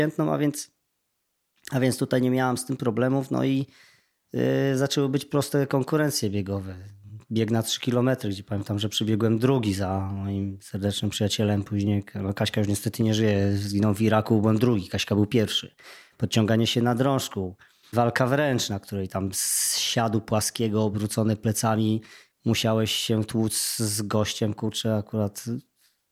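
Speech, with nothing technically wrong with it.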